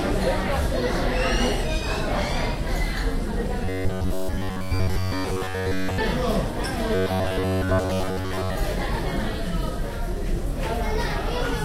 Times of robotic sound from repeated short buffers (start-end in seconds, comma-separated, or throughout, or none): 3.65-5.99, 6.95-8.56